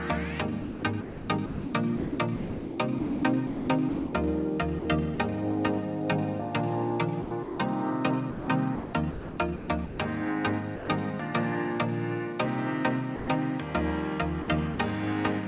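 From 0.62 to 4.13 s, the sender's voice detector most likely kept toggling between sending and holding back, so the audio is chopped by the voice detector. About 2.07 s of that stretch is swapped for comfort noise. The same chopping returns from 4.79 to 5.18 s (about 90 ms filled), 7.22 to 7.58 s (240 ms), and 8.30 to 9.98 s (870 ms), where softer edges of the sound vanish into that comfort noise.

At 10.76 to 10.88 s and again at 13.16 to 13.28 s, the detector likely judged quieter material to be background and stopped sending outright. The sound is dropped by the voice detector for 120 ms each time, giving way to steady noise before returning.

A final chopped stretch runs from 14.42 to 14.78 s, with about 90 ms filled. Underneath all of this, the narrow band with nothing above 4 kHz fits a G.711 A-law call link.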